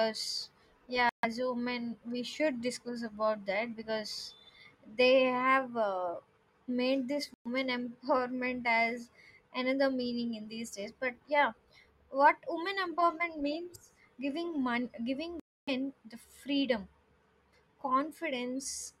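At 1.09 s, 7.34 s and 15.40 s the speech cuts to silence for about 0.16, 0.13 and 0.30 s, the last gap clearly the longest. These holes are likely a Bluetooth dropout, with packets reaching the headphones too late and being discarded. Unlike a stall or buffer underrun, the speech does not pick up where it stopped. It resumes further along, as though it kept playing through the silence, so the missing stretch is skipped rather than delayed.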